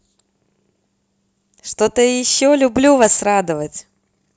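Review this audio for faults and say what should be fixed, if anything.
Nothing here needs fixing; no faults turned up in this speech clip.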